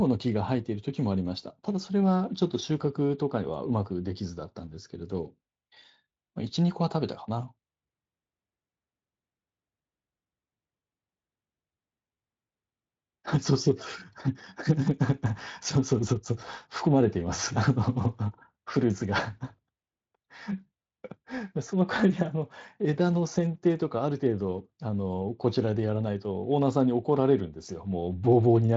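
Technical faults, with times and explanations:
No technical faults detected.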